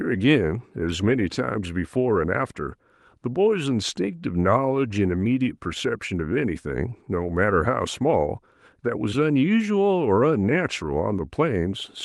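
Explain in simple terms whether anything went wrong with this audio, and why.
Nothing went wrong with this speech recording that a careful listener can pick out. At no point does the sound break off, jump or change in a way that would point to a technical problem.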